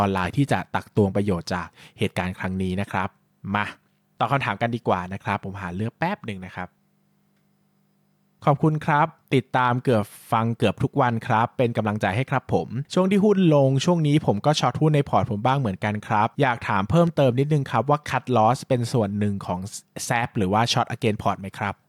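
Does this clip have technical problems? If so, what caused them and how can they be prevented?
No, nothing stood out as a technical problem on listening, so there is no cause to trace and nothing to prevent.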